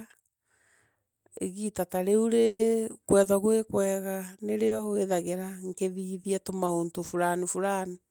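At 2.45 s a burst of packet loss cuts out about 140 ms of the speech, through 2.61 s. The receiver covers the gap by carrying the last sound forward and lowering it as the gap lengthens, and about 10 ms of silence sits among that fill. The result is a held, fading smear in place of the real audio. Speech then picks up further along, with those 140 ms missing.

Three short concealed packet losses follow, at 3.23 to 3.27 s, 4.67 to 4.73 s and 6.65 to 6.69 s. The first and last lose about 20 ms and the middle one about 40 ms. Each time the decoder invents a brief continuation of the preceding sound and blends back into the real signal. They are heard as quick smears or wobbles rather than clean gaps.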